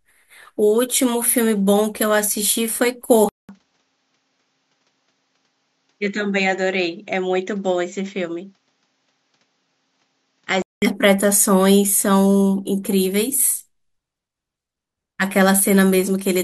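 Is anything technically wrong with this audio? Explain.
Yes. From 3.29 s to 10.82 s the input was likely switched to a poorer device with a narrower band. After a 200 ms silence at the switch, the speech loses everything above 7.6 kHz and sounds duller and somewhat quieter, with faint new background noise, until it clears again.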